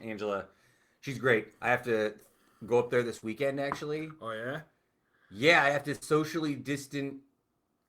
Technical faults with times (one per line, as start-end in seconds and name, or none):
3.17-3.23 short concealed packet loss
5.95-6.03 burst of packet loss